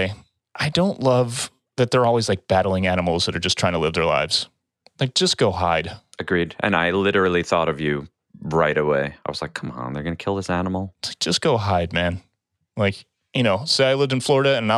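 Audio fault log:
Nothing stood out on listening to the speech in this clip.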